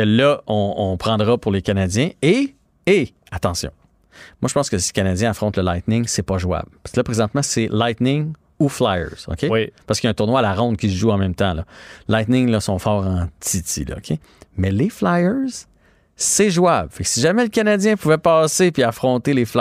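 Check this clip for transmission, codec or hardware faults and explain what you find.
Nothing to flag here: no faults found anywhere in the speech.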